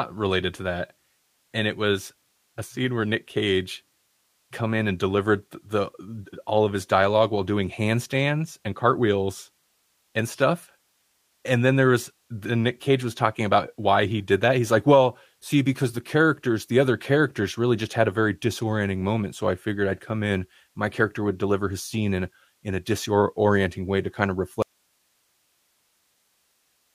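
At 24.62 s, after "way to kind of", an audio dropout to a faint residue begins. The speech cuts abruptly, not fading, to hiss that runs to the end, likely from a lost signal on a still-live path.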